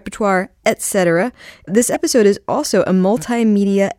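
At 0.64 s there's a faint blip, then a louder squeak from 1.94 to 1.97 s just before "is also a": each a corrupt frame decoded anyway, scattering energy across wrong frequencies.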